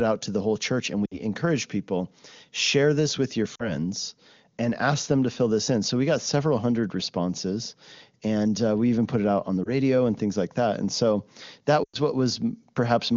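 Lost AMR speech frames occur at 1.06–1.16 s, 3.55–3.75 s after "share this with your", 9.63–9.70 s between "it out on the" and "and things like that", and 11.84–11.98 s after "so that". Each time, corrupted frames were concealed by repeating earlier parameters with decaying gain. The result is brief fading dropouts, the last and longest fitting about five 20 ms frames, against clean wideband AMR coding.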